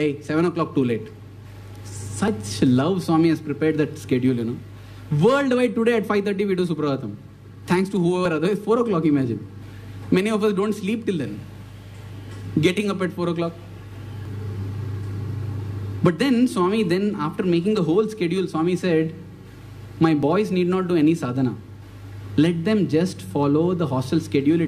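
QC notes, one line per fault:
2.28 s, 8.25 s, 14.25 s, 20.23 s: overlap between stream segments. At each point a few milliseconds of audio are missing (about 9 ms at the first two, about 6 ms at the last two) and the waveform jumps straight across the gap, heard as a tiny skip. The events recur roughly every 6 s, which fits 6-second segments whose timestamps overlap. The player trims the overlapping span even though that sound was never actually duplicated, so real material is discarded at each join.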